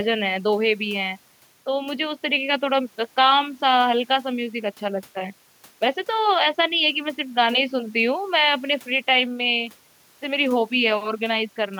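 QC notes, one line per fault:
Nothing to flag here, the speech comes through without any problems worth a QC line.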